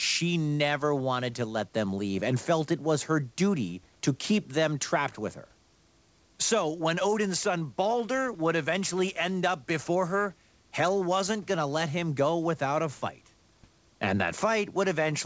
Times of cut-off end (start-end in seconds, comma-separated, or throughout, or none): none